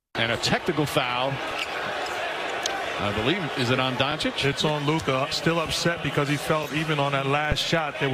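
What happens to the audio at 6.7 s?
Overlapping chunks at 6.64 to 6.67 s: the 2.5 s chunk starts before the previous one ends, so about 23 ms replays, heard as a brief stutter-click.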